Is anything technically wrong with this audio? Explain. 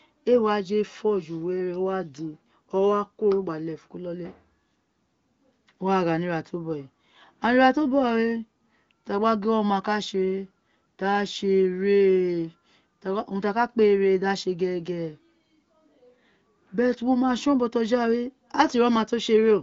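No, nothing technically wrong is audible here.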